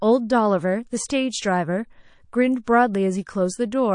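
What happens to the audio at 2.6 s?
At 2.64 to 2.67 s there is pre-echo. A hiss, about 19 dB above the surrounding floor, spreads across the 34 ms before a sharp onset, and the attack sounds soft and smeared. That fits a long transform block of about 52 ms with no switch to short blocks, so the quantisation noise meant for the loud attack leaks into the quiet moment before it. On a spectrogram it shows as a broadband vertical smear just ahead of the onset. On the waveform it looks like low-level fuzz before the transient.

Under this, MP3 compression runs through the whole clip, likely from encoding at around 40 kbps. The audio has a watery, swirling quality. A spectrogram would show patchy holes flickering frame to frame.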